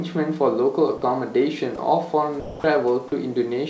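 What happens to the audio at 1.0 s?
Right around there, from 0.98 to 1.02 s, about 40 ms of the speech drops out and is replaced by a steady hiss. That's most likely sound dropped by the voice detector: the sender briefly judged it background, stopped transmitting, and the receiver filled the gap with comfort noise.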